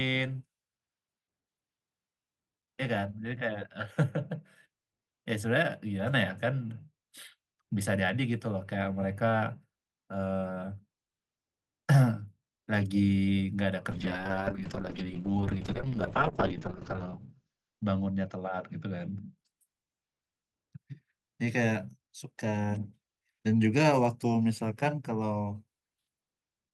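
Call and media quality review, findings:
Call bitrate drop, 13.93–19.43 s: speech turns rough and muffled. Encoder rate falls from 40 to 6 kbps after a bandwidth-estimate drop, bottoming out for about 2.4 s. Spectrogram shows the top edge collapsing from 20 kHz to 8 kHz, then recovering.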